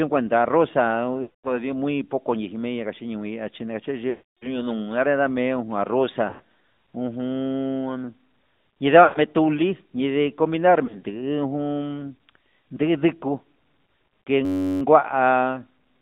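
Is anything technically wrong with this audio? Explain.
Yes, there are three faults: the whole recording has passed through a narrowband mobile codec, there are five bursts of lost speech frames, and there is a brief system hang loop near the end.

AMR narrowband mobile codec, throughout the clip: This speech was coded with AMR-NB, which rebuilds the voice from a vocal-tract model excited by a few pulses per subframe. Only about 150 Hz to 3.7 kHz survives, so the speech sounds thin and boxed-in, like a phone call. The codec damage is plainly audible as a buzzy, synthetic edge. That fits a mid-range rate of around 10.2 kbps.

Lost AMR speech frames, at 1.22 to 1.59 s, 4.10 to 4.66 s, 6.30 to 6.41 s, 9.04 to 9.19 s and 10.86 to 11.03 s: Each time, the decoder had no valid data and carried the last pitch and vocal-tract settings forward at falling gain. The longer gaps of 220 ms and 320 ms are heard as a smeared, stretched sound fading to silence before the voice returns rough. 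The 100 ms and 120 ms gaps are shorter smears. Just after "inde comindar" there are three isolated 20 ms losses spread over 160 ms, which give small warbling dips.

System hang loop, 14.45 to 14.82 s: The host stalled while the audio hardware kept replaying the same small ring buffer. A 10.67 ms slice, which fits a 512-sample buffer, repeats 34 times. At that length it fuses into a steady buzz at about 94 Hz instead of a stutter. Little or no speech appears to be skipped when it ends.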